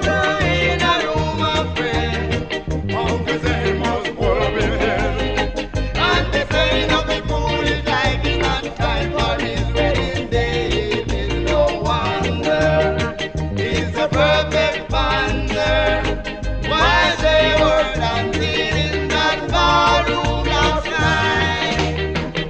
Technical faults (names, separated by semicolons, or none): none